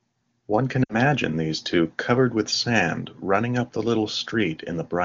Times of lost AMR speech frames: 0.84-0.96

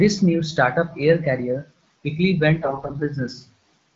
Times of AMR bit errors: 2.62-3.01

